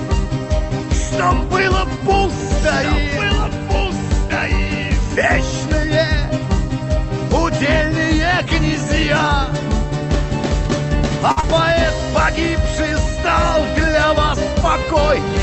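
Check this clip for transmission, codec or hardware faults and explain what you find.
Two closely spaced network faults sit just after 11.3 s, heard over the call path's codec, whose top end stops near 8 kHz.

Short stall from a late packet, 11.31 to 11.39 s: a packet arrived after it was due and the jitter buffer ran dry. The receiver held the last sound going for about 52 ms until the packet came in, then resumed from the same point, so nothing is lost. What you hear is a sound drawn out slightly too long with a faint buzz or dip. Everything after it plays 52 ms later than before.

Short concealed packet loss, 11.41 to 11.45 s: about 20 ms of audio never reached the decoder in time. The receiver patched the gap by extending the preceding sound, carrying its pitch forward if it was tonal or filling with shaped noise if it was not, then crossfaded back into the real signal. It comes through as a short smear or wobble, with that 20 ms of original sound gone.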